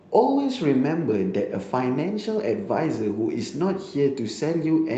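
Nothing in this recording of speech stood out as a technical problem on listening.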